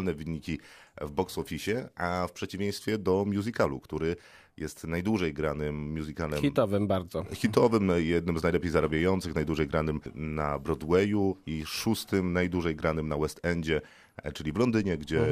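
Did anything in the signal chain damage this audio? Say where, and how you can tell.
No, nothing in the signal chain has left an audible mark on this speech recording: level, timing and frequency content hold steady throughout, with no sign of damage at any stage between capture and playback.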